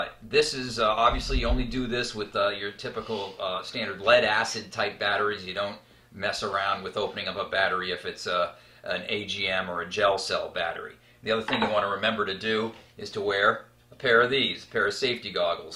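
No faults turn up anywhere in the audio; there's nothing to flag.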